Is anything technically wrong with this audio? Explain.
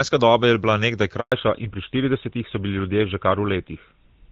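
Yes, there are two faults, and they occur back to back.

Handover gap, 1.20 to 1.32 s: the call was switched from one network to another, and for about 120 ms no speech frames reached the receiver. The speech cuts out within a few tens of milliseconds and falls to complete silence until the new link delivers audio again. Whatever was said during that interval is gone rather than muffled or delayed.

Fallback to narrowband, from 1.32 s to the end: the new link did not continue on the wideband HD Voice codec. The call instead moved to an older narrowband codec, consistent with GSM full rate. Nothing above 4 kHz survives, so the upper detail of the speech is lost. The speech sounds duller, boxier and rougher than in the first 1.2 s, where the wideband AMR-WB coding carries the clearer, fuller band.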